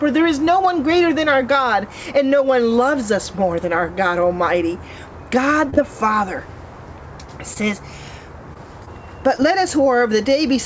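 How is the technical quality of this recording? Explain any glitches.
The recording has two kinds of network glitch: several brief dropouts that were patched over, and one short stall. The audio also has nothing above 8 kHz, which fits a wideband call codec such as G.722 at 64 kbps.

Short concealed packet loss occurs at 5.70–5.79 s (two consecutive losses, 5.70 s and 5.74 s), then at 8.54–8.57 s, 8.85–8.89 s and 9.37–9.40 s. Each time, about 20 ms of audio never reached the decoder. The receiver filled the gap by extending the preceding sound, then crossfaded back into the real signal. Each one is heard as a quick smear or wobble, and the double loss near 5.7 s gives a slightly longer wobble.

A short stall from a late packet occurs at 7.54–7.58 s. A packet arrived late, the jitter buffer ran dry, and the receiver stretched the last sound by about 20 ms while waiting. Playback then resumed from the same point, so nothing is lost. 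The audible result is a sound held a fraction too long, with a faint buzz or momentary dip, and the playout delay increased by about 20 ms from there on.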